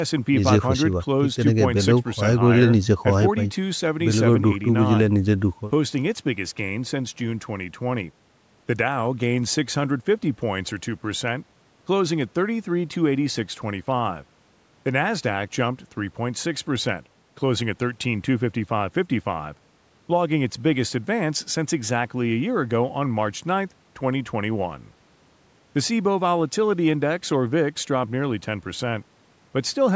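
No technical faults are audible.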